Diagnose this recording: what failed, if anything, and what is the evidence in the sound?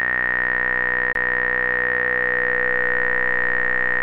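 A CD skip at playback: a tick and roughly 20 ms mute at 1.13–1.15 s, then the sound resumes elsewhere on the disc's spiral, unlike a dropout, which resumes in place.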